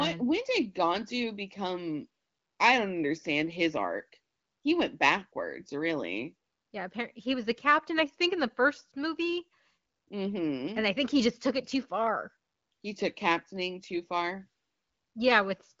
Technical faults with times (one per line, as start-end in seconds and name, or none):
none